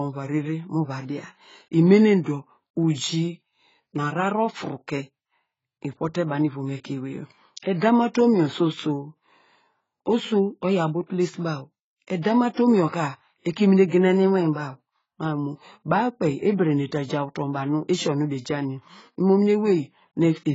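Speech, band-limited and coarsened throughout in the way AAC compression leaves it, with pre-echo on two attacks. Nothing is present above 7.6 kHz. Sibilants lose their top and sound dull, and the remaining spectrum has a heavily quantised, smeared quality. That is likely AAC-LC coding at a very low rate, consistent with something around 16 kbps, where the encoder drops the upper band entirely and spends its few bits coarsely on what remains.

Pre-echo appears twice in quick succession, from 12.22 to 12.25 s and from 12.54 to 12.57 s. Each time a short hiss runs ahead of a sharp onset, smearing it back by 31 ms and 36 ms respectively. The transform spreads quantisation noise across its whole block, so noise sized for the loud attack also fills the quiet stretch just before it, softening the attack itself.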